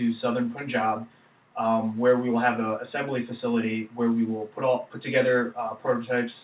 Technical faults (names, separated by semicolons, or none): none